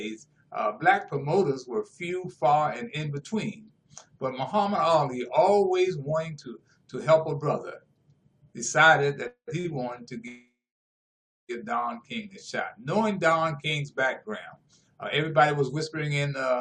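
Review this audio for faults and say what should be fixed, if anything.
Two call audio freezes occur, at 9.27 to 9.49 s and at 10.28 to 11.51 s. In each, the last sound carries on as a fading buzz or hiss and then drops to silence, for about 100 ms in the first and about 930 ms in the second. The audio then resumes where it stopped, with nothing skipped, so the two freezes add about 0.2 s and 1.21 s of delay. The likely cause is packets held up in transit until the jitter buffer ran dry. Unlike a short stall, these run into real silence. Preventing them means fixing the network path causing the delivery holdups.

A short stall from a late packet follows at 9.59 to 9.66 s. The last sound is held for 50 ms with a slight buzz or dip, then continues from the same point, losing nothing and adding 50 ms of delay. It differs from the freezes because it is brief and never fades to silence. Only one packet was late, so the buffer stretched the sound and stopped there. 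A slightly larger jitter buffer margin would absorb a single late packet like this.

A jitter buffer slow-down runs from 12.09 to 12.40 s. The receiver repeated single pitch periods and bits of pauses to rebuild its reserve. This adds 52 ms, so that stretch plays at about 86% speed with the pitch unchanged and sounds drawn out. It differs from a stall because the lengthening is spread as many small repeats rather than one held sound. Avoiding the earlier underruns would remove the need for this refill.

A jitter buffer speed-up covers 14.52 to 16.32 s. After the backlog built up, the buffer held more audio than its target, so it cut short pitch-period pieces many times in a row. Around 0.15 s in total was removed, and the audio runs at about 108% speed with the pitch unchanged, sounding hurried. This is the mirror of the slow-down: the audio is squeezed rather than stretched. Steadier packet timing would prevent this kind of catch-up.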